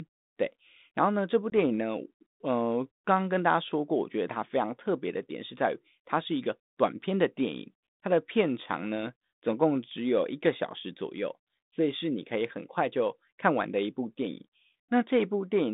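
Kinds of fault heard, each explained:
Packet loss on an ADPCM call: about one packet, 20 ms at 1.5 s, drops to silence, leaving a hard-edged flat gap in the waveform and a blank vertical stripe on the spectrogram.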